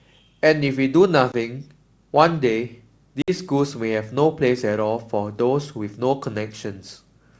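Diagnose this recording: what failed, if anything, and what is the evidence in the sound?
Packet loss on an ADPCM call, at the network stage. Hard-edged silences open at 1.32–1.35 s and 3.22–3.32 s, losing 20 ms and 60 ms, roughly one and three packets. The G.722 decoder's predictor and step size then drift, so speech resumes slightly distorted.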